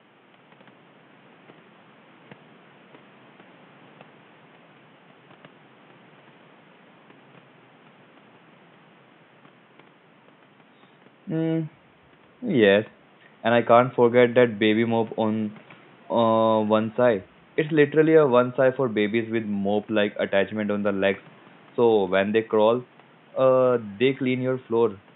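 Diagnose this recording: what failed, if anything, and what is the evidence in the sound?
Nothing stood out on listening, with only the room's background noise audible at about 32 dB below the speech.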